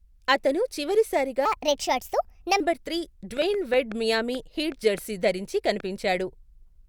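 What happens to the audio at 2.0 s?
At 2.0 s the speech falls inside a section at the wrong speed, 1.45 to 2.60 s, running 1.33 times fast and about five semitones high, likely from playback against a mismatched clock.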